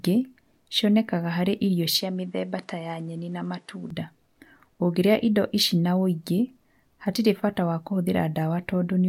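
Speech clip, and from 2.00 to 3.90 s the sound goes duller, with nothing above 11.4 kHz, a level drop of roughly 5 dB and a new noise floor around 40 dB down, no gap at the switch, likely the input switched to a poorer device.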